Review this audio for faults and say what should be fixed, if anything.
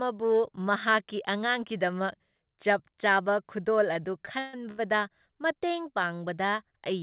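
The speech drags and stutters between 3.94 and 4.80 s, with four short stalls, the longest 139 ms. These are repeated stalls (stutter): late packets emptied the jitter buffer, and the receiver stretched the last sound across 243 ms. Nothing is lost. To prevent it, give the jitter buffer more headroom or steady the network so packets arrive at the rate they are played.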